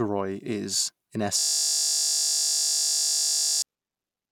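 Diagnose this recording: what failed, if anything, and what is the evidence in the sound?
System hang loop at the driver or buffer stage. After "is in", 1.39 to 3.62 s, a frozen 20 ms buffer keeps replaying as a steady 50 Hz buzz.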